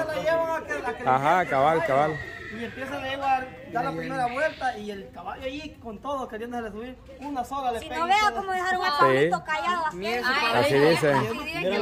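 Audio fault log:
No faults heard anywhere in this recording.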